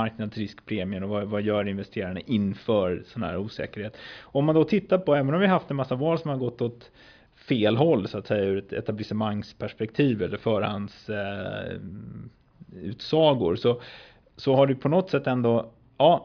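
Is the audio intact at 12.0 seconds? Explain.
Yes, the audio is intact at 12.0 seconds, without any dropout, click, distortion or other audible fault.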